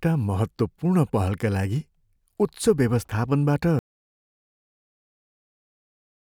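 At 3.79 s the speech cuts off into an audio dropout to silence that runs to the end of the clip. The gap is silent with no room tone, likely because the input was lost while the recorder kept writing. Whatever followed is missing.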